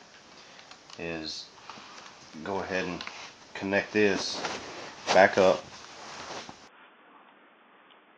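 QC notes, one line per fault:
6.68–8.17 s, input switched to a poorer device: with no gap, the sound turns dull and boxy, a few dB quieter, with a new faint noise floor underneath, likely from a narrower-band input. The spectrogram shows everything above 3.5 kHz cut off abruptly, and the waveform steps down.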